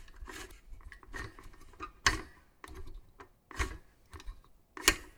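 Samples were likely not collected before the hardware overwrote them, a dropped buffer (overrun), at 0.51, 1.20, 2.05 and 4.27 s. Each gap joins directly with an audible jump ahead: about a third of a second lost at 0.51 s, roughly a tenth at the others.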